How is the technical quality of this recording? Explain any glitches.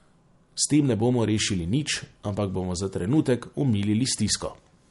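The recording's technical quality is noticeably degraded throughout by lossy encoding. Across the whole clip the speech sounds watery and swirly, with smeared consonant attacks. The likely cause is MP3 compression at a low bitrate, consistent with about 48 kbps. The starved encoder discards everything above 11.2 kHz and switches weak frequency components on and off between frames. A spectrogram would show a flat ceiling at 11.2 kHz with patchy, flickering holes beneath it.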